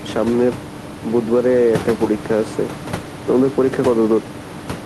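Nothing technical stood out on listening to the speech, with only ordinary room noise in the background, sitting about 14 dB below it.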